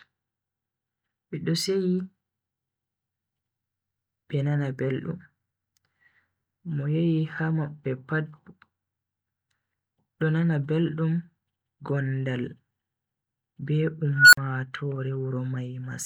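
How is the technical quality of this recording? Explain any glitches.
One glitch stands out, near the end of the speech. From 14.13 s, a whistle around 1.5 kHz swells over roughly 196 ms into harsh, clipped distortion. The audio then drops to silence for 45 ms, ending at 14.37 s. This is an unstable filter: a recursive filter running with bad coefficients kept feeding its output back with a loop gain above one, so the output grew ever larger. The tone grew until the signal clipped, the numbers overflowed, and the output went silent until the filter reset.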